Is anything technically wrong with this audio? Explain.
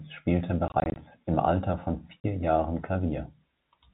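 Yes. Packet loss filled with silence appears twice. From 0.68 to 0.96 s, about 120 ms of audio drops out in short holes scattered over 280 ms, none longer than 20 ms, consistent with individual 20 ms packets going missing. Near 2.2 s, roughly 40 ms more vanishes. The receiver substitutes silence, so the speech is chopped, with hard edges. The audio passes through G.711 telephone coding, so nothing above 4 kHz is present.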